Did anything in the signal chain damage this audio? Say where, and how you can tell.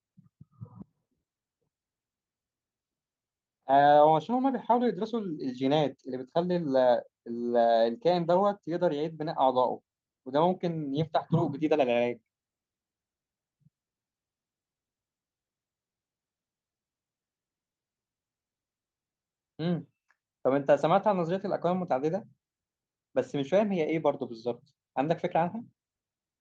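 No, nothing damaged it.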